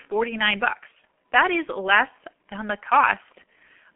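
From start to finish the speech carries the sound of the G.723.1 codec, an early internet-telephony coder, here at 6.3 kbit/s. The line passes only about 150 Hz to 3.4 kHz, so the top end is gone and the voice sounds muffled. Its long frames and slow-updating voice model, pushed hard at this rate, leave a hoarse, rough texture and smear consonants together. The faint room noise, about 53 dB below the speech, is part of the recording.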